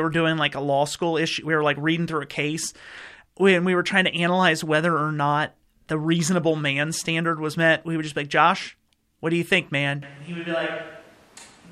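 Speech clip, and right after "do you think man" at about 10.02 s the sound suddenly goes roomy and hollow, loses bass and drops roughly 10 dB, with room noise only around 25 dB under it. It stays that way to the end, likely a switch to a distant microphone.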